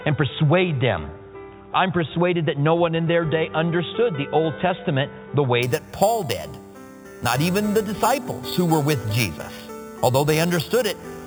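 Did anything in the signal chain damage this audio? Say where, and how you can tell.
Yes. From 5.63 s to the end, a zero-order-hold upsampler raising 8 kHz audio to 48 kHz added imaging from sample-and-hold upsampling: metallic fizz between 4 kHz and 8 kHz, about 15 dB down.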